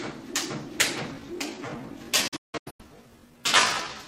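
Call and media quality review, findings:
Time-stretched section from 1.08 s to the end: pace drops to about 0.65x with pitch held. Likely a stretch algorithm repeating short chunks.

Digital broadcast dropout, 2.28 to 2.84 s: several short muted holes, longest 171 ms, with 8 ms fades. The receiver lost frames and muted, which fits roughly nine bad frames.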